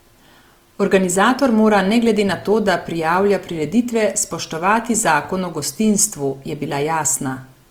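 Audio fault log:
throughout Opus compression: the speech is plainly degraded across the whole clip, with harmonics turned grainy and rough and a fizzy, noisy texture in the upper bands. There is no muffling and little swirl, and content extends to about 20.2 kHz. This is likely Opus in its fullband CELT music mode, which keeps each band's energy but fills bit-starved bands with folded or noise-like content. The amount of damage fits a rate around 24 kbps.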